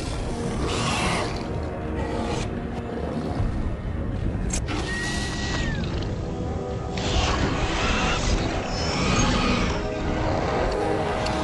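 At 5.26 s the receiver loses its digital signal and, over a 179 ms cross-fade, falls back to the station's FM broadcast until 10.82 s. This is digital radio blending to analogue: level holds steady, but hiss rises, roughly 30 dB below the sound.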